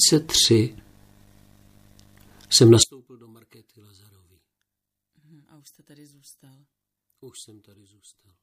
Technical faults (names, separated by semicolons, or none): one channel inverted